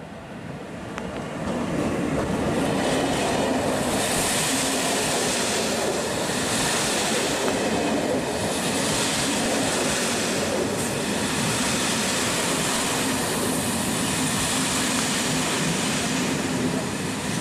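At 0.98 to 1.19 s two loud pops land in quick succession, about 15 dB above the sound, which carries on beneath; they were likely caused by a voltage step from a plug, switch or static. From 3.92 to 4.47 s DAB burbling appears: residual bit errors corrupt individual MP2 sub-bands for a frame at a time, giving burbling noise across 23 frames rather than clean clicks. Single loud pops follow at 7.48 and 8.89 s, brief burbling at 9.37 to 9.46 and 12.75 to 12.96 s, and a final pop at 14.99 s.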